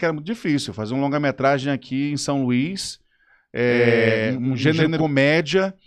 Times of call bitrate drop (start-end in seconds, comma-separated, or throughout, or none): none